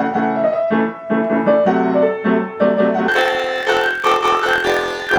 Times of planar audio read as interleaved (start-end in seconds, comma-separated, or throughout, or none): 3.08-5.19